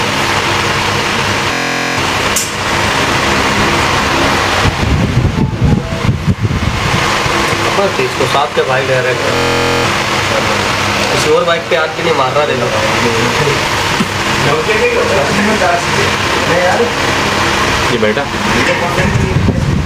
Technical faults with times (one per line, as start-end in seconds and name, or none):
0.00-19.85 gain pumping
1.53-1.97 system hang loop
9.36-9.85 system hang loop